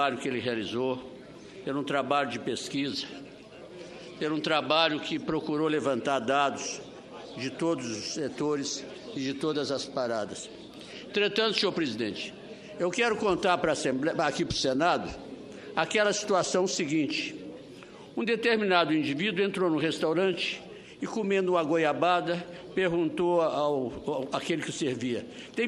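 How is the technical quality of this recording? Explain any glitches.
Nothing here glitches or breaks up, so there's really nothing to explain on that front.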